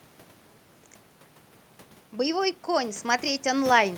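Automatic gain rising from 2.13 s to the end of this speech recording: after the input level fell by about 16 dB, the gain control judged the signal too quiet and steadily raised its amplification, so the voice and the room noise behind it swell up together over the final stretch rather than in a single jump. The level change near one second, by contrast, sounds like the talker shifting position at the microphone.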